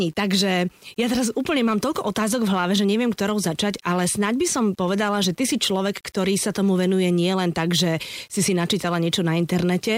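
Speech runs throughout with grainy, signal-following distortion on quieter passages and noise roughly 40 dB below the signal, consistent with 8-bit rounding, likely low bit depth without dither.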